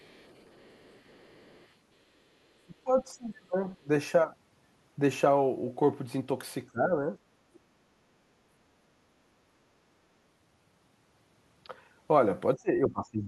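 Other side's voice leaking through, from 0 to 1.72 s of this speech clip: a faint second voice, roughly 35 dB under the talker, sits in the background. It is likely loudspeaker sound reaching the microphone that the echo canceller failed to fully remove. Speech suppressed in double talk then occurs at 2.66–3.56 s, 3.78–3.88 s, 6.71–7.07 s, 7.51–7.6 s, 7.77–7.89 s, 12.55–12.69 s and 12.87 s to the end. The talker's voice dips by roughly 20 to 30 dB in these stretches, likely because the canceller mistook overlapping far-end speech for echo and attenuated everything.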